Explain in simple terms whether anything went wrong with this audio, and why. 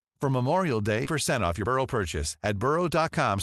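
Two things went wrong. At 1.05 s there's a skip ahead: about seven-tenths of a second of speech got dropped, and playback jumps straight to the later audio without a gap. Then from 1.35 to 3.38 s a jitter buffer speed-up kicks in. The receiver trims tiny slices to catch up, so the speech runs about 12% fast, same pitch, and sounds hurried.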